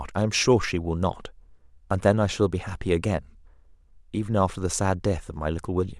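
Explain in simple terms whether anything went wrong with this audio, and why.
Nothing went wrong here: the speech runs without any dropouts, glitches or distortion that a listener would notice.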